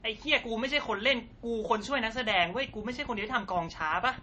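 Speech with audible MP3 compression throughout, likely from a bitrate near 32 kbps: nothing above 8.2 kHz, with watery, swirling artefacts that move with the sound rather than a steady hiss. From 2.17 to 4.19 s a train of clicks, likely interference, adds about fifteen similar ticks at a regular 8 per second, roughly as loud as the speech and unlike random crackle.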